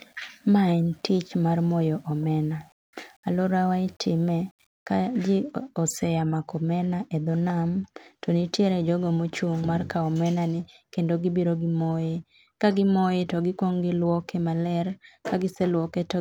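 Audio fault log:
0.0–4.87 s, low bit depth without dither: quiet speech turns grainy and gritty, with error about 40 dB down. Likely undithered rounding, consistent with about 9 bits.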